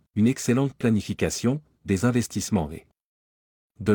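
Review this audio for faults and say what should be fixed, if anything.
Nothing to fix: no faults are audible anywhere in the speech.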